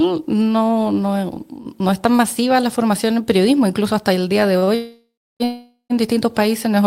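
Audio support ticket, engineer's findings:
Short stall from a late packet, 4.58 to 4.64 s: final sound held about 38 ms, slight buzz or dip, resumes at the same point, nothing lost. Short stall from a late packet, 4.64 to 4.69 s: held again, about 32 ms. Component: jitter buffer. Mechanism: packet late, buffer empty, receiver stretches the last sound until arrival. Combined added delay about 70 ms.

Call audio freeze, 4.75 to 5.42 s: last sound continues as a fading buzz or hiss, then about 300 ms of silence. Resumes where it stopped, nothing lost, 650 ms gap inserted. Call audio freeze, 5.44 to 5.92 s: same pattern, 460 ms gap, about 110 ms silent. Likely cause: packets delayed in transit, jitter buffer underrun, receiver fill until packets arrive.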